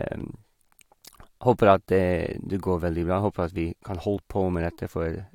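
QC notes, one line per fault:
4.16 s, compressed frames skipped: speech jumps ahead about 0.1 s, leaving a brief glitch at the join.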